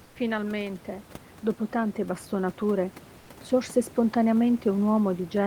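Likely discontinuous transmission pauses the sender at 0.03–0.15 s and 3.19–3.29 s, so comfort noise replaces the room background with a steady, featureless hiss about 2 dB quieter.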